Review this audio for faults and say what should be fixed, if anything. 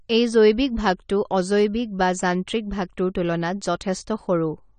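Throughout the speech, nothing is heard above 9 kHz, and sibilants and sustained sounds carry a plainly audible warbling, fizzy texture. This is likely AAC compression at a low bitrate, fitting about 32 kbps AAC-LC, where coarse quantisation leaves spectral holes. A simple low-pass filter would only dull the sound without adding that smeared, swirly artefact. To prevent it, encode from the original source at a higher bitrate or use a lossless format.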